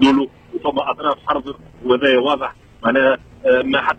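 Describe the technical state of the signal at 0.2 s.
At 0.2 s the signal is intact, with no audible dropout, distortion, or other fault at that point.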